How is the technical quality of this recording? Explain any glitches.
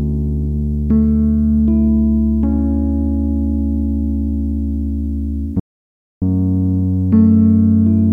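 One glitch is audible, an audio dropout to silence. From 5.60 to 6.22 s the sound cuts to silence for about 0.62 s, likely because the input was lost while recording continued writing silence.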